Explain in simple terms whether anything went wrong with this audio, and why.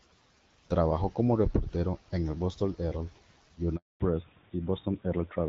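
At 3.76 seconds the call was passed from one network to another, a handover gap. For about a quarter of a second, until 4.00 seconds, no speech got through, so the voice cuts out abruptly and anything said in that moment is simply lost.

Right after the switch, from 4.00 seconds to the end, the call fell back to narrowband. It left the HD Voice codec, which had been carrying clear, full speech, for an older phone codec that drops everything above 4 kHz, so the voice sounds duller and flatter.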